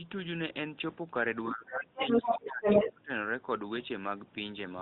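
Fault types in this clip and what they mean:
Speech suppressed in double talk: the talker's voice dips by up to about 20 dB for roughly a second and a half, likely because the echo canceller muted both sides during overlap.
Other side's voice leaking through: a second voice breaks through in two short scraps, up to roughly 10 dB above the talker, likely residual loudspeaker echo the canceller missed.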